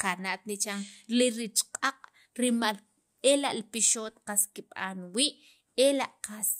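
No technical faults can be heard anywhere in the recording.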